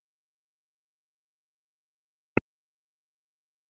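At the very start, from 0.00 to 0.16 s, the echo canceller treats the loudspeaker output as something to remove and clamps the microphone path hard. This is background gated by the echo canceller: the room sound underneath drops by about 40 dB, close to silence, for roughly 150 ms in total, then returns once the canceller releases. The effect is a brief hole in the ambience.

From 0.44 s to the end of the clip, the talker's speech is suppressed in double talk. Both sides are likely active at once, and the echo canceller cannot tell the near talker from the far-end echo, so it turns the speech down along with the echo. The voice sinks deeply, down by a large amount at its worst. Above this, the audio carries the 8 kHz ceiling of the Opus call path.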